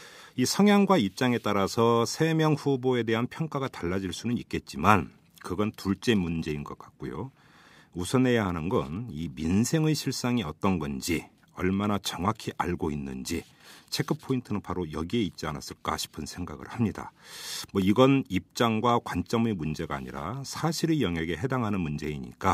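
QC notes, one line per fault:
17.82 s, block of digital silence: the speech cuts to silence for 0.38 ms and returns with no fade, so both hard edges merge into one tick rather than an audible hole. The abrupt, unramped cut separates it from a faded or gated dropout.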